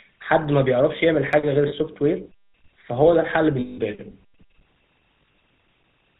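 Speech with a buzzy, gravelly roughness throughout and nothing above 4 kHz, the sound of the GSM full-rate codec: the vocal tract is modelled and driven by sparse, regularly spaced pulses, which fits 13 kbps full-rate GSM. Two single sharp clicks at 0.45 s and 1.33 s are likely dropped samples, a handful missing from the stream so the waveform jumps abruptly. Lost GSM frames give a rough, metallic held ring at 1.68 to 1.73 s (40 ms) and at 3.6 to 3.79 s (180 ms). Between 5.22 and 5.38 s, 80 ms of frames are lost in scattered short runs of about 20 ms at most. In each case the last good frame's settings are repeated.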